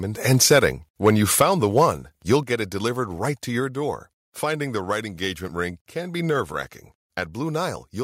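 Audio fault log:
0.31–0.66 s, 1.05–1.10 s, 1.40–1.44 s, 1.78–1.85 s, 2.31–2.33 s: microphone overload. The loudest speech peaks turn harsh and crackly, driven up to about 4 dB past the converter's limit. The likely cause is an input set too hot, so the converter flattens the waveform tops. The burst at 1.40 s has the most clipping.
1.42 s, 2.43 s, 3.60 s: microphone volume stepped down. The whole level, speech and background together, drops abruptly by about 3, 5 and 2 dB, with no added distortion. This likely comes from the call software cutting the input gain after the clipped peaks. Unlike the overload, it is a clean, lasting drop in level rather than a crackle.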